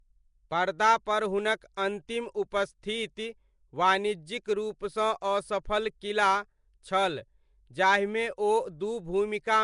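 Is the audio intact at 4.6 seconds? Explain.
No. At 4.6 seconds the speech carries the same rough, hissy halo and smeared, underwater quality heard through the whole clip, likely from Nellymoser compression. This codec splits the audio into short blocks and spreads a fixed, small bit budget across bands. Weak bands get no bits and are refilled with noise, which creates the hiss. Nothing comes through above about 10.6 kHz, which fits a stream of roughly 44 kbps. Unlike MP3's watery swirl, the damage here is a steady noise fill rather than metallic chirps.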